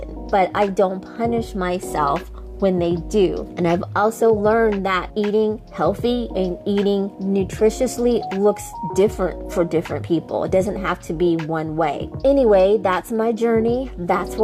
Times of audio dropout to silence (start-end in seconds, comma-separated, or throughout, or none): none